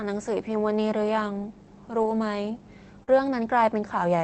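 From 2.01 to 2.11 s the speech turns briefly rougher and noisier, with no gap in the flow. This is a lost packet rebuilt from error correction. About 60 ms of audio, which fits three separate 20 ms packets, never arrived. The decoder played the low-bitrate copies that the following packets carried instead.

At 3.03 to 3.09 s there is a short smear and wobble, where the sound seems to stretch rather than move on. This is a short concealed packet loss. About 40 ms was missing, so the receiver extended the preceding sound to cover the hole and then blended back into the real signal. Within that window, from 3.07 to 3.09 s, a further lost packet was rebuilt from error correction, giving a rougher 20 ms patch just before normal audio resumes.

All of this sits on an Opus call path whose coding noise points to roughly 24 kbps.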